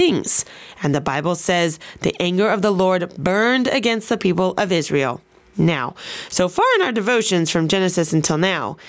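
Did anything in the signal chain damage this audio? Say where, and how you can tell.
Yes. Gain pumping throughout the speech, most likely from an input gain set far too high feeding a fast limiter or compressor. The gain swings by about 15 dB under each loud syllable, squashing the dynamics, within a normal call band with nothing above 8 kHz.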